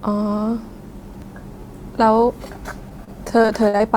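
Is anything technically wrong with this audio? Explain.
Yes. The speech has two kinds of playback fault.

A repeated buffer occurs twice, at about 1.21 s and again at 2.53 s. Each time, fresh audio failed to reach the output device in time, so it replayed the block it already held, once, before continuing. The repeated piece is very short, which fits a buffer of about 10 ms. A hard join at each end makes it sound like a brief click or tiny buzz rather than a stutter, and roughly that much of the original audio is lost.

Repeated packet loss (robotic sound) affects the stretch from 2.89 s to 3.81 s. Packets went missing repeatedly here, about seven separate holes with the longest near 49 ms. Each hole was patched by extending the last received sound, and the next hole came soon after. Around a fifth of the span is concealed this way. The speech comes across as choppy, with small pieces dropped out.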